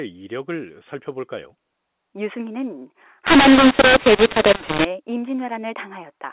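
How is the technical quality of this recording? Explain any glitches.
The speech turns harsh and gritty from 3.27 to 4.85 s, with levels jumping unevenly and the gaps filling with hiss. That stretch shows mu-law and A-law mixed up: telephone audio coded as A-law is decoded as mu-law, so each 8-bit value maps to the wrong amplitude and near-silent samples come out well above zero. Around it, the G.711 telephone coding gives the familiar narrow sound, with nothing above 4 kHz.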